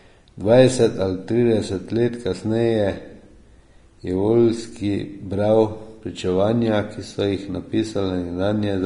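Speech runs through the whole clip with plainly audible Vorbis compression damage, likely from low-bitrate encoding at 33 kbps. Treble is coarsely quantised into grainy hiss, consonant attacks are blurred, and a spectrogram shows a hard ceiling at 10.6 kHz with speckled, noisy energy beneath it.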